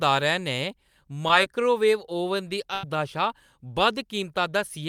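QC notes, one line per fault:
1.28 s short concealed packet loss: 10 ms never arrived and a 6 ms continuation bridged it, so only a quick smear is heard, not a gap.
2.74–2.84 s burst of packet loss: 90 ms was lost and filled by a continuation that holds and fades, then the speech resumes with that stretch missing.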